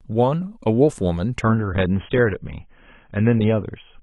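From 1.41 s to the end, the speech abruptly turns dull and thin, with nothing above about 3.8 kHz and more codec artefacts, yet with no gap at the switch. This is an adaptive stream at a lower bitrate: the player dropped to a cheaper encoding when the connection slowed. The sudden treble loss and rise in codec artefacts point to AAC falling from roughly 96 to 16 kbit/s.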